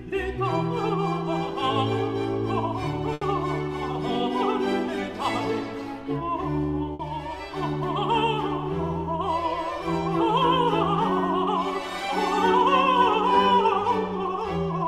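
At 3.13 s a short stall from a late packet holds the sound for about 80 ms. The packet came late, the jitter buffer emptied, and the last sound was stretched until it arrived. Nothing is lost. Playback resumes 80 ms behind, with a faint buzz or dip.

At 6.93 s a burst of packet loss drops 60 ms of audio. The receiver extends the last sound and fades it over that stretch, giving a brief held buzz or hiss. The audio then jumps ahead, with the missing part gone.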